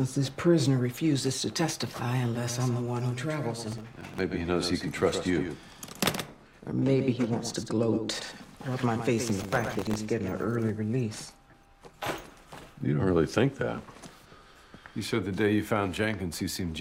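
From 2.35 s to 10.69 s a doubled audio track appears, most likely because a second, slower capture path is feeding the same signal into the mix. A full-band copy trails about a tenth of a second behind, roughly 10 dB quieter, with no room colour, switching on and off abruptly.

Processor overload crackle occurs twice, at 3.72 to 4.20 s and 9.29 to 9.96 s. The processor falls behind on tiny buffers of well under a millisecond, missing dozens in a row and replaying old audio each time, which produces a gritty, tearing crackle that stops once the load eases.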